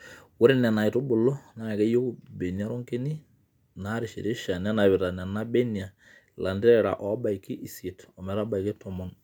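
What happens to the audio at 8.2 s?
Nothing goes wrong at 8.2 s; the speech carries on intact through that moment with no dropout, click or distortion.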